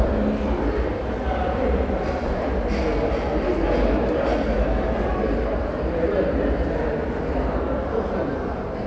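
No technical faults are audible.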